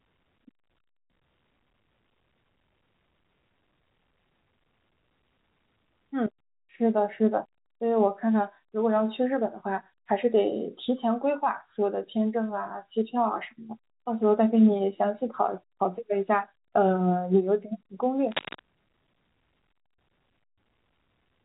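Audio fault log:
18.27 to 18.60 s, cable scratch noise: for about a third of a second a dense, ragged scratching and rustling sits over the speech, only a few decibels below it and loud enough to compete with it. The grainy, uneven bursts are likely from a worn cable, connector or control being moved, its contact resistance jumping rapidly and injecting noise. The burst stays within the telephone band, like the rest of the speech, capped just under 4 kHz by the G.711 coding.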